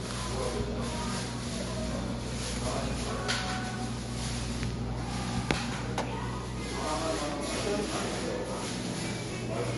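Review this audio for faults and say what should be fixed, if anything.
MP3 compression, likely the cause, runs throughout: the treble stops dead above 11.3 kHz, and weak detail flickers in and out, giving a watery, swirly texture with smeared attacks, which fits a bitrate near 43 kbps. Keep an uncompressed or higher-bitrate master and encode from it.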